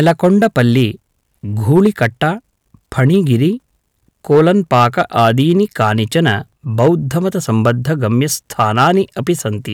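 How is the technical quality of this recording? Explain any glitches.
The recording has repeated hard clipping in the speech at 0.00–0.83, 1.71–2.28, 2.99–3.35, 4.31–6.35, 6.80–6.88, 7.66–7.71 and 8.60–9.30 s. Peaks overdrive a stage by about 1 to 7 dB and are sliced flat, adding high harmonics heard as harsh crackly fuzz. Unlike rounded soft saturation, the edge is abrupt and gritty.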